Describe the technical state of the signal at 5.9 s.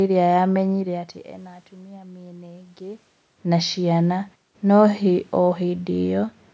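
At 5.9 s the speech signal is intact, with no technical fault present at that moment.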